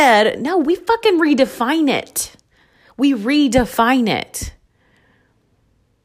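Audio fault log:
No faults are heard anywhere in the speech. There is nothing to log for any part of the recording.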